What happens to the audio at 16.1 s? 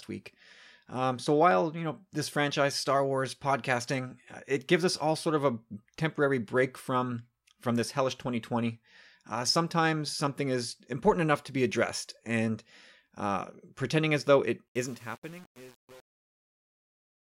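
At 16.1 s the fade-out after "pretending as though it" shows truncation distortion, from 14.68 to 17.38 s. The undithered fade, which fits roughly 7-bit resolution, turns the waveform into square steps, so it sounds gritty, with broadband hash on a spectrogram.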